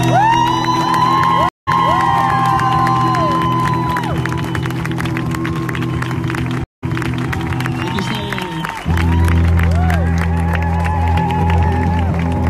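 A recording of sounds with two stream reconnects, at 1.49 s and 6.64 s. Each drops out for about 0.18 s, then a fresh decoder resumes 0.30 s and 0.49 s earlier.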